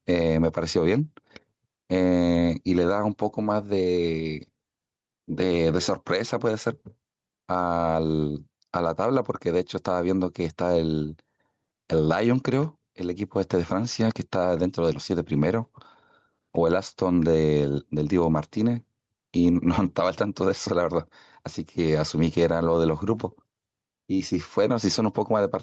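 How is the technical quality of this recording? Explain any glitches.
The speech has audible gain pumping throughout. The level swings by around 5 dB, which squashes loud and quiet passages together. The likely cause is microphone gain set far too high, with a fast limiter or compressor pulling it down on every peak. As with audio carried over an Opus call link, nothing sounds above 8 kHz.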